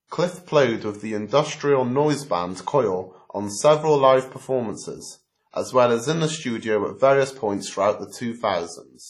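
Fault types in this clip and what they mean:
WMA compression: Throughout the speech the sound is ringing and washy, with a hiss that swells and fades along with the signal, and nothing at all is left above 14.4 kHz. The damage is heavy, which fits a low-bitrate encode around 32 kbps, likely from a WMA transform codec. On a spectrogram there is a hard ceiling at 14.4 kHz, with patchy holes where weak components were zeroed and smeared noise around louder parts.
pre-echo: Just before one sharp attack, from about 5.51 to 5.54 s, a brief hiss of roughly 29 ms arrives ahead of the onset. The transform spreads noise meant for the loud moment back into the quiet gap before it, so the attack itself sounds softened and smeared. On the waveform a low fuzzy ramp leads the transient, and on the spectrogram a faint broadband smudge appears just before the attack's vertical edge.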